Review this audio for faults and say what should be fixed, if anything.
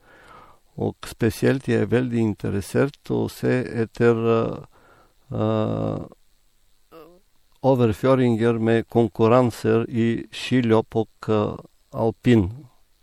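Throughout the speech, a low-bitrate MP3 was likely saved at a high bitrate; artefacts fitting a 64 kbit/s first encoding remain, unrestored by the larger file. To prevent it, encode once from the original uncompressed master instead of re-encoding an already compressed copy.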